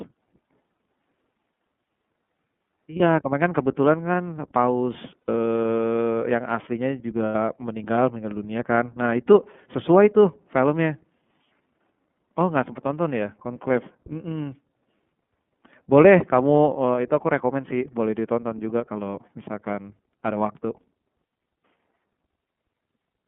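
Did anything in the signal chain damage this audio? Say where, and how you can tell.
Yes. The damage sits at the codec stage. Throughout the clip the speech is confined to roughly 150 Hz to 3.5 kHz, with nothing above that. The voice is clear but rough and slightly synthetic. That is the iLBC codec at work. It codes each 30 ms frame on its own at a low rate, which points to the 13.33 kbps mode. The coarse excitation coding is plainly audible.

The network stage adds lost iLBC frames. Three gaps appear: 2.96 to 3.01 s, 5.20 to 5.29 s, and 7.26 to 7.35 s. The first lasts 30 ms, about one frame. The other two last 90 ms, about three frames. Each sounds like a held, buzzy vowel. The decoder repeats the last pitch cycle mixed with noise to fill the missing packets. Normal speech returns almost at once, because each frame decodes independently.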